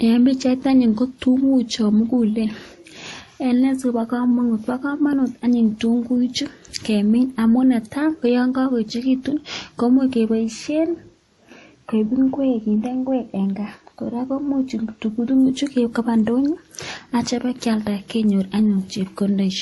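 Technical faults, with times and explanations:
Throughout, transcoding between lossy codecs: the speech carries two overlapping layers of coding damage, heard together, with nothing above 11.5 kHz. This fits a likely low-bitrate MP3 re-encoded to WMA, wasting bits on inherited artefacts.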